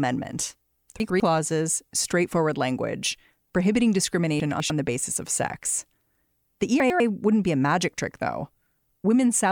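At 1.0–1.2 s, 4.4–4.7 s and 6.8–7.0 s the speech has chunks out of order: a 100 ms chunk plays one, two, then one chunk late. Nothing is lost, but each swap makes a brief jumbled moment with three hard joins.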